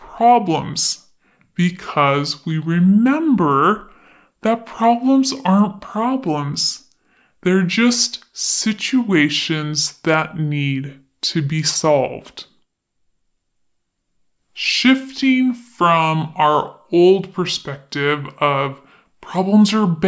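From start to finish the speech plays back at a wrong sample rate, slowed to about 0.73 times speed. Pitch drops about 5.5 semitones, sounding low and dragging.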